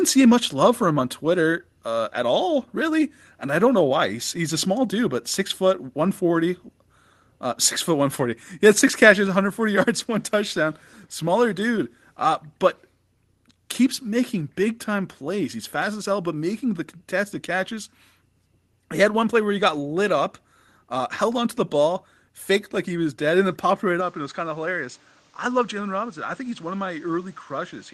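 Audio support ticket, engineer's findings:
Level drop at 9.27 s, right before "one hundred forty". Whole signal, speech and background together, steps down about 3 dB in one go and stays there. Clean step, no ramp. Likely the microphone volume stepped down by the call software's input gain control, which trimmed the device input after deciding it was running hot.

Tone change from 24.0 s to the end, right after "and then popped right". Sound goes dull and boxy with the top end cut, level drops roughly 5 dB, and a new noise floor sits around 30 dB under the speech. No gap at the changeover. Likely the input switched to a poorer device with a narrower band. The Opus call path passes up to about 12 kHz, so that ceiling points to the new input and not the codec.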